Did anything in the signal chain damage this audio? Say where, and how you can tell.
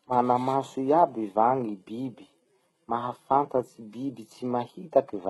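Yes, at the codec, all the way through: the speech's s sounds come out heavily gritty and metallic, likely from HE-AAC compression rebuilding the treble from copied lower bands at around 16 kbps.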